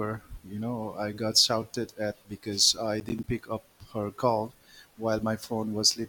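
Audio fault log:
3.0–3.24 s, processor overload crackle: between "shouted at because I" and "pick up her call", the speech breaks into a quarter-second of gritty crackle. The processor fell behind and missed a run of buffer deadlines, about five in a row, which fits buffers of roughly 10 ms each. Every missed buffer played out as a short hole of silence with abrupt edges, and those hard on-off cuts stacked together are what make the tearing texture until the load eased.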